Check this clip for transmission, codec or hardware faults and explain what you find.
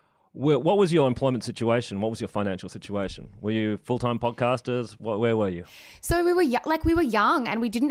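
Nothing in this speech clip stood out as a problem on listening.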